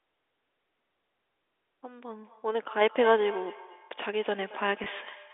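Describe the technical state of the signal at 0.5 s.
At 0.5 s the speech is intact, carried on a telephone-band G.711 line that passes roughly 300 Hz to 3.6 kHz with no fault present at that moment.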